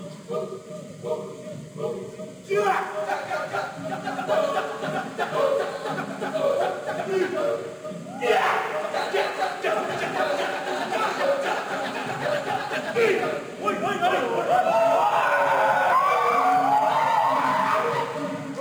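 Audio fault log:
Throughout, crude rate conversion. A gritty, inharmonic fizz rides on the louder and brighter sounds. Samples were simply dropped, with no filtering, which fits a 48 kHz to 44.1 kHz change. The uneven dropping pattern creates unrelated tones, roughly 30 dB below the sound.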